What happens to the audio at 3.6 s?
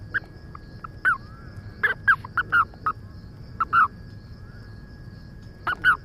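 Nothing goes wrong at 3.6 s; the audio plays through that moment intact, with no dropout, click or other fault.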